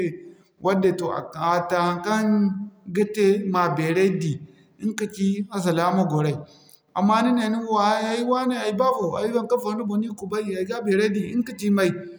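Nothing in the recording stood out as a technical fault on listening.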